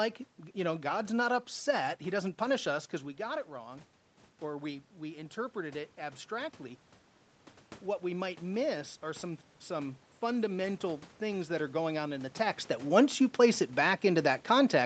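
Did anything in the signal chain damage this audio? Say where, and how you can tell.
Yes. At the call-processing stage, automatic gain rising sets in at 4.46 s, after the input level falls by about 10 dB. The call's gain control judges the signal too quiet and raises its gain by about 4 dB, gradually, until 6.88 s. You can tell because the voice and the room noise swell together over those two and a half seconds. A talker moving closer would lift the voice more than the background.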